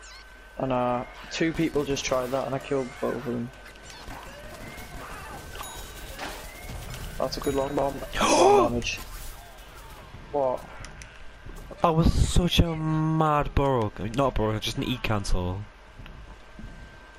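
No technical faults are audible.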